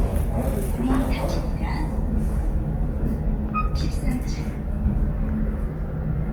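From start to finish, the sound carries Opus compression artefacts, likely from the music mode at a low rate, roughly 24 kbps. Tones turn grainy, rough and noisy rather than swirling or metallic as with MP3, and the band still reaches about 20.2 kHz.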